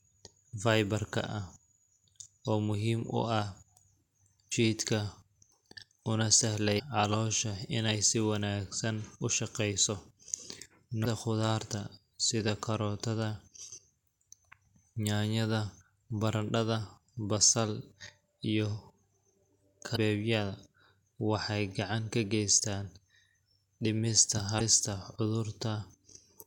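Damaged data in a compressed stream occurs at 4.48–4.53, 6.76–6.80, 11.01–11.06, 19.92–19.97 and 24.57–24.62 s. Corrupted bytes make the decoder misread frames and lose sync until it finds the next frame header, leaving chirps or blips of about 45 ms in the speech.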